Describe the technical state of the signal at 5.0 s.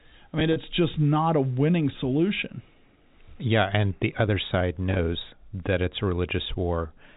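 Packet loss with pitch repetition runs from 4.91 to 4.99 s: about 50 ms of gaps, longest 20 ms, are filled with a repeated pitch cycle, giving a brief buzzy hold that shows as identical repeating waveform periods and flat, frozen harmonics on a spectrogram.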